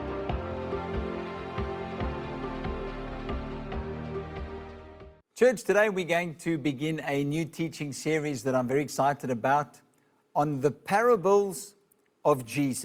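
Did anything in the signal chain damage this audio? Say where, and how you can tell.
No, nothing damaged it.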